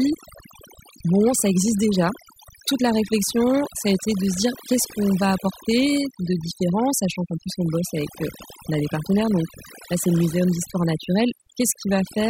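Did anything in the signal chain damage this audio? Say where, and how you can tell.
Yes. Overdone noise removal runs throughout this speech, a processing-stage fault: the suppressor cuts any frequency band near its noise estimate, so gaps fall to near silence with twinkling specks, and quieter parts of the voice vanish too.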